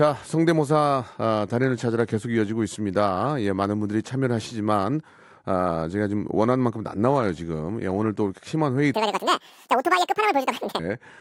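From 8.94 to 10.79 s the speech plays at a wrong sample rate, running twice as fast and a full octave (12 semitones) higher. This fits 24 kHz audio played at 48 kHz unconverted. A spectrogram shows harmonics and formants spaced twice as widely, and the waveform looks squeezed in time.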